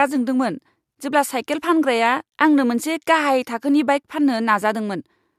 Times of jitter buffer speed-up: none

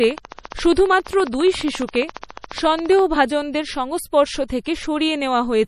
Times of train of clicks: 0.04-3.00

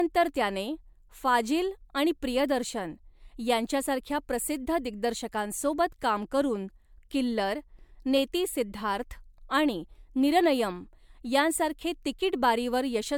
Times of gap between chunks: none

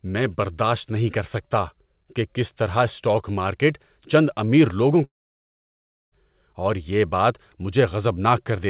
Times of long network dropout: 5.04-6.14

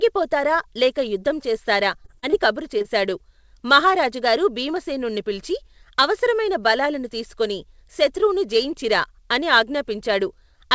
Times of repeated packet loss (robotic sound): 2.02-2.34

